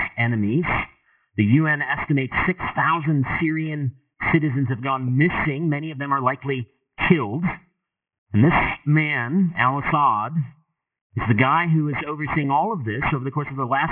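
Aliasing runs from start to finish. The sound points to a sample-rate drop from 48 kHz to 6 kHz with no low-pass filter beforehand, so everything above the new 3 kHz limit has folded back down into the band at unrelated pitches. The folded energy sits only around 10 dB below the wanted signal, giving a gritty, metallic edge to bright content. On a spectrogram, energy runs hard up to 3 kHz, with mirrored, wrongly sloped traces beneath that edge.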